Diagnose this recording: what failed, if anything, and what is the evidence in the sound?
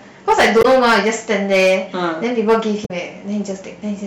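Every louder syllable carries a harsh, gritty fuzz, because the speech was driven about 9 dB past what the converter or sample-format stage could pass. That is hard clipping: a few percent of samples have their peaks sliced flat, and those flat tops spray harmonics high into the spectrum.

Two brief glitches interrupt the speech, from 0.59 to 0.65 s and from 2.82 to 2.91 s. These point to damaged data in a compressed stream at the codec or storage stage. Corrupted frames are misread by the decoder, which loses sync and then hunts for the next valid frame header.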